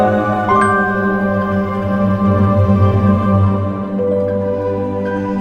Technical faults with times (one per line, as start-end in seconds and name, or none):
none